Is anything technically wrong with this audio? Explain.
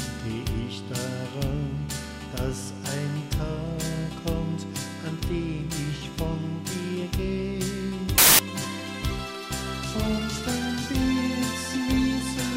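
Yes. From 8.18 to 8.39 s the audio has samples built from the wrong bytes: the bytes of each sample are assembled in the wrong order or alignment, so the rapidly changing low bits become the dominant part of each value. For that 0.21 s it bursts into loud, harsh broadband noise.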